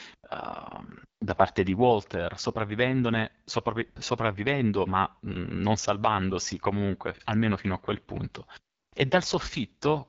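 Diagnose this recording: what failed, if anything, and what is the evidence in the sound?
The codec stage is the culprit here: the whole clip carries the sound of the AMR wideband (HD Voice) codec running at a low rate. The speech has a rough, raspy texture from start to finish, and nothing comes through above about 7.5 kHz. That grit fits one of AMR-WB's two lowest modes, something like 8.85 kbit/s, where the pulse model can't track the voice closely, and the top band is just shaped noise.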